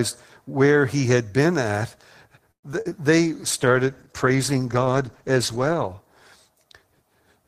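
Repeated packet loss (robotic sound) from 2.51 to 2.93 s, right after "he had been at": several short dropouts, the longest about 120 ms, patched by extending the previous sound, leaving a choppy stretch.

A call bitrate drop from 3.23 to 5.96 s: the encoder is starved of bits, which fits a fall from 32 to about 13 kbps, so the speech turns coarse, watery and dull until the rate recovers.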